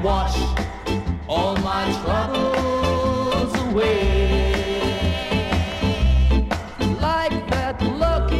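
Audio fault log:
Nothing stood out on listening.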